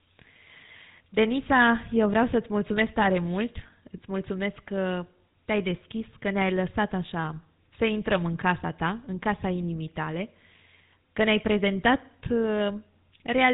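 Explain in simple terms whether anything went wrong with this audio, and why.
The speech sounds buzzy and gravelly from start to finish, with a muffled, phone-line dullness because nothing above about 3.9 kHz comes through. That is GSM full-rate codec damage: the old mobile-phone codec rebuilds the voice from a coarse pulse pattern, adding that rough buzz.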